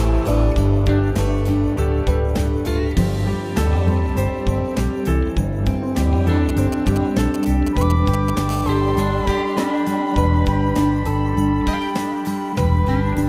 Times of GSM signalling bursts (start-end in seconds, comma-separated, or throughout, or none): 6.49-8.39